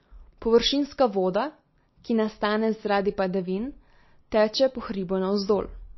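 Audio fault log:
Throughout, MP3 compression: the speech sounds dull and plainly damaged, with nothing above 5.8 kHz, so sibilants lose their edge, and a watery, swirling texture clings to the sound. This is likely heavy MP3 encoding at a low bitrate, roughly 26 kbps. Starved of bits, the encoder cuts the treble at a fixed point and drops weak frequency lines that then flicker on and off between frames.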